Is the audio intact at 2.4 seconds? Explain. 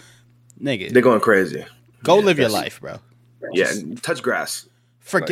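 Yes, the speech at 2.4 seconds plays through intact, with no audible fault at that moment.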